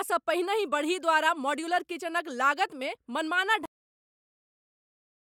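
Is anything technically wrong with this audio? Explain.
Yes. The speech has a cut-off end. At 3.66 s the audio stops partway through a sound and stays at digital silence through 5.3 s. The final stretch of samples was never written out, so the waveform has no fade or decay. It simply falls to a flat line. On a spectrogram, energy across all frequencies ends at a hard vertical edge and is followed by a completely empty region to the end of the file.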